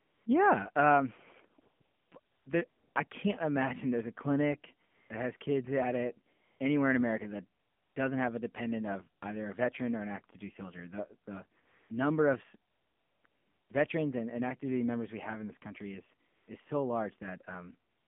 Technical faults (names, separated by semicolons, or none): AMR narrowband mobile codec; AMR comfort noise